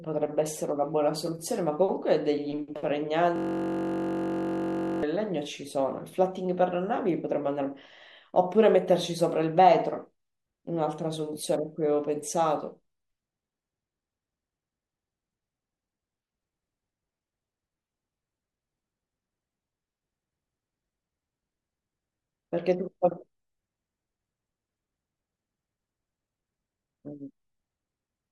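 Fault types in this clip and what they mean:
System hang loop, 3.36 to 5.03 s: the speech stops advancing and a single 21.33 ms slice of audio repeats back to back, about 78 times, because the playback hardware keeps cycling the same ring buffer while the system feeding it has frozen. The length fits a 1024-sample buffer. With a slice this short, the repeats fuse into a steady buzz at 46.9 Hz rather than a stutter.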